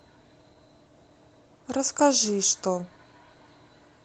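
Nothing stood out as a technical fault on listening to this speech clip.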